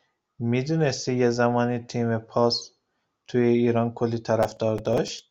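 From 4.43 to 5.20 s a gritty, tearing crackle rides over the speech. This is processor overload crackle: short buffers of around 5 ms repeatedly missed their deadlines, roughly fifteen of them, and each miss replayed stale audio with hard edges, so the clicks pile into a rough burst.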